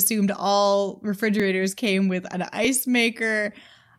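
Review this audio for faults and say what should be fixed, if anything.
Two repeated-buffer faults occur in the speech, at 1.40 s, just before "came with an", and at 2.65 s, just after "came with an". At each point the playback device did not receive new audio in time and replayed its last buffer once. The repeated piece is about 2.9 ms long, which fits a 128-sample buffer. That is too short to stutter, so each event is heard as a brief click at the hard join, with essentially no audio lost. To prevent it, enlarge the output buffer or raise the audio thread's scheduling priority so each buffer is filled before its deadline.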